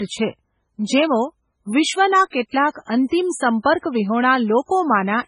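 Speech, carrying heavy MP3 compression damage from start to finish: swirly, watery texture with chirpy sibilants and smeared onsets, which fits a bitrate around 16 kbps. On a spectrogram nothing appears above 10.5 kHz, and sparse blocks of energy flicker on and off between frames.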